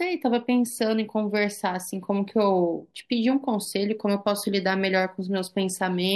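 No technical faults can be heard anywhere in this speech recording. There is nothing in it to place on a timeline.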